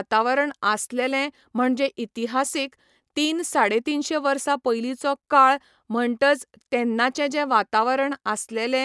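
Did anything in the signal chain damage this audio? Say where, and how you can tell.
No, nothing in the signal chain has damaged this speech recording. No stage, from the analogue input through to playback, leaves any audible trace.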